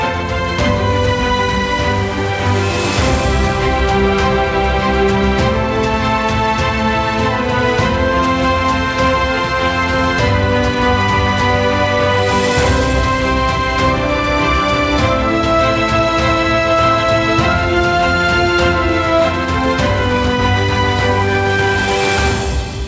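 No technical faults can be heard in this audio.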